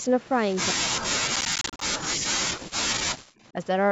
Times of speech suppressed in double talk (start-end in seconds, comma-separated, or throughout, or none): 0.72-3.14